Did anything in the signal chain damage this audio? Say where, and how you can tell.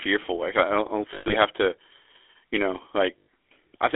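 Yes. The GSM full-rate codec runs throughout the speech: a buzzy, gravelly roughness and a band of about 250 Hz to 3.4 kHz point to this codec stage at its 13 kbps rate, which rebuilds speech from a vocal-tract model excited by sparse, regularly spaced pulses.

Lost GSM frames occur at 1.14 to 1.34 s, with losses scattered through that span and the longest gap around a tenth of a second, and again at 3.19 to 3.28 s. At each point the decoder held the last good frame, producing a rough, metallic ring. This is network loss concealed at the codec.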